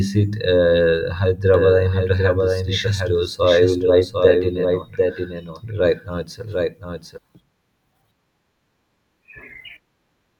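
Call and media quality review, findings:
Doubled audio track, 1.54–7.18 s: speech repeats about 0.7 s late, a few dB quieter, full-band and dry, cutting in and out abruptly. Likely a second capture via a slower path, or an edit leaving two offset copies mixed.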